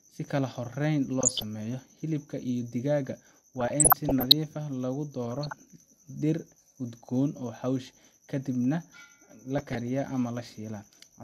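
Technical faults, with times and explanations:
1.21–1.42 s, 3.60–4.32 s, 5.25–5.65 s and 9.58–9.88 s: DAB burbling. Burbling noise sits over the speech in four short bursts. Weak reception left bit errors that the error correction missed, at under one percent. These corrupted samples and scale factors in the MP2 stream. Single sub-bands then jumped in level for up to a frame at a time. The longest burst suggests dozens of damaged frames in a row.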